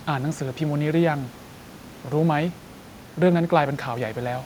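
Nothing goes wrong with the system anywhere in this speech clip; the only thing under the talking is a bit of room noise sitting about 25 dB below the speech, and that's part of the recording itself.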